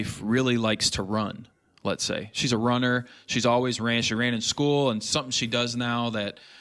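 Nothing technically wrong turns up in this speech recording; there's no fault to point to anywhere in it.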